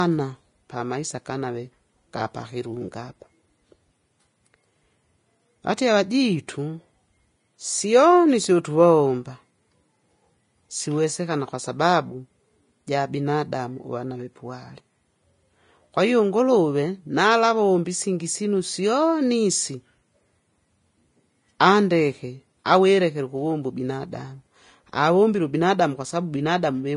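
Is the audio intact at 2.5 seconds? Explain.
No. At 2.5 s, as throughout the speech, the signal has likely been through low-bitrate Vorbis compression, consistent with roughly 30 kbps. Nothing remains above 10.5 kHz, and the coarsely quantised treble becomes hiss, making the voice grainy and roughened, with blurred onsets.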